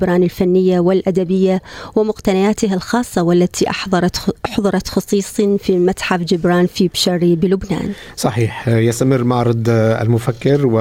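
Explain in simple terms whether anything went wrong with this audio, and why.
Nothing went wrong; no faults can be heard here.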